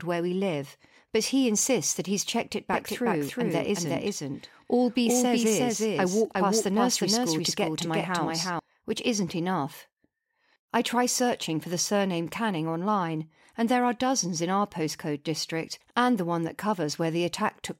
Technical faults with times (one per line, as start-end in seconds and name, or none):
2.73-8.59 doubled audio track